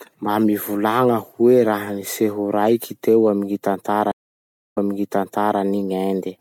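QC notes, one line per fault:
4.12–5.60 s, stream reconnect: the connection dropped and a fresh decoder restarted mid-stream, leaving 0.59 s of silence before speech resumes 0.89 s earlier, repeating material.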